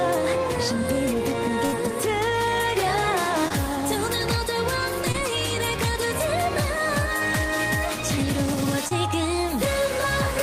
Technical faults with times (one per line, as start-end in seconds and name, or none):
1.65-1.74 burst of packet loss
3.48-3.52 short concealed packet loss
5.12-5.16 short concealed packet loss
8.88-8.93 short concealed packet loss